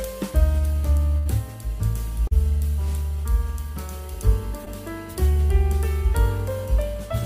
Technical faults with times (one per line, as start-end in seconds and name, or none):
1.17-1.27 burst of packet loss
2.27-2.33 short concealed packet loss
4.65-4.68 short concealed packet loss